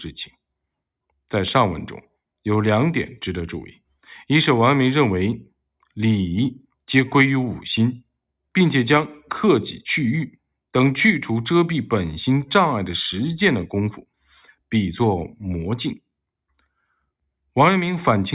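No technical faults can be heard anywhere in the speech recording, and the signal holds steady throughout.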